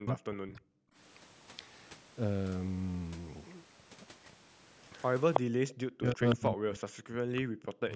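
From 0 to 0.73 s the speech is likely hit by speech suppressed in double talk. With both ends talking at once, the echo canceller cannot tell this talker from the loudspeaker echo and turns everything down. The speech drops by up to about 40 dB, thinning and breaking into pieces. The same thing happens from 5.41 to 5.71 s and again, for about 2 seconds, from 5.93 to 7.91 s.

Around those stretches there is likely echo leak. One side's canceller lets part of its loudspeaker pickup back into the call, so a copy of the speech returns about 321 ms late in short scraps. At 4.95 s it is a faint trace. At 5.33 s it is nearly as loud as the speech. Further scraps come at 6.3 s, moderately quiet, at 7.36 s, a little quieter, and at 7.92 s, faint again.

The call's microphone processing leaves nothing above 8 kHz.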